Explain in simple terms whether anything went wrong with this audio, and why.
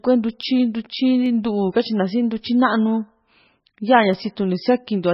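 The speech was squeezed hard to save space, most likely by heavy MP3 compression. The encoder threw away the treble and the quieter detail, so the voice sounds muffled, watery and swirly, with a metallic edge on s sounds, all the way through.

A few tiny pieces of the recording also went missing, which is what dropped samples are, likely only a fraction of a millisecond each. The sound jumps abruptly where each gap was, causing a short sharp click at 0.43, 1.26 and 4.13 seconds.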